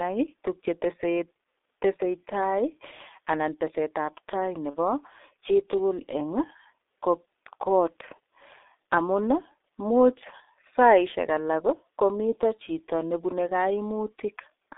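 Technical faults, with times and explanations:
Throughout: G.723.1 codec at about 6.3 kbit/s, heavily damaging. The line band of 300 Hz to 3.6 kHz removes all brightness, and the slow-updating voice model in 30 ms frames leaves the speech hoarse and consonants smeared, a constant colouring rather than a passing event.
4.70–4.77 s: VoIP packet loss concealed by the speech codec. One 30 ms frame went missing, and the decoder filled it by repeating its last pitch and filter at falling gain. It briefly turns into a buzzy tone or coloured noise and fades instead of going silent or clicking, and recovers over the next frames.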